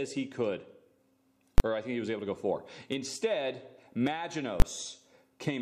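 A calculation in the processing chain produced infinite or invalid numbers, pinning the output at full scale for 20 ms blocks at 1.58 to 1.60 s and 4.60 to 4.62 s. These invalid numbers at full scale each land as a single very loud bang cutting through the sound.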